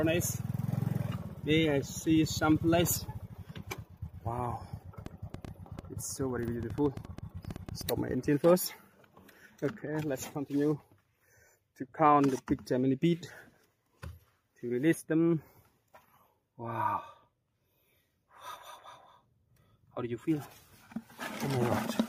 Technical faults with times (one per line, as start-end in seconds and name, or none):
5.06-7.82 train of clicks